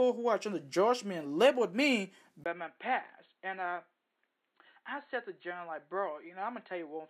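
Speech recording in which the input likely switched to a poorer device at 2.44 s, after a 20 ms silence. From there to the end, nothing passes above 4.2 kHz, so the sound turns dull and boxy, drops roughly 10 dB, and carries a faint new noise floor.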